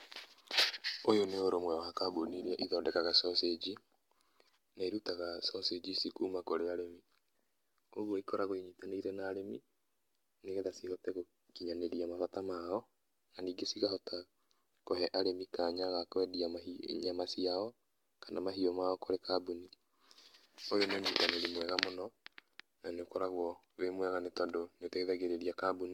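Speech with generation loss throughout. It sounds swirly and hollow, with blurred attacks, likely from repeated lossy encoding, about five passes, consistent with AAC at 96 kbit/s.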